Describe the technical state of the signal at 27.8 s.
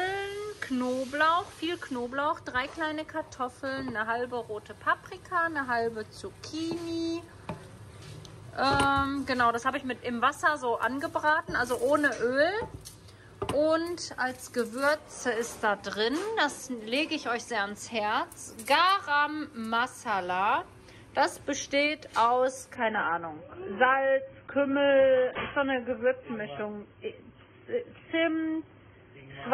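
At 27.8 s the audio is inside an adaptive stream at a lower bitrate stretch running from 22.75 s to the end. The stream has switched abruptly, with no gap, to a much leaner encoding, which points to roughly 16 kbit/s AAC. Treble vanishes above 3.4 kHz, leaving a dull sound. A spectrogram shows a sharp ceiling there from 22.75 s, while the waveform stays continuous.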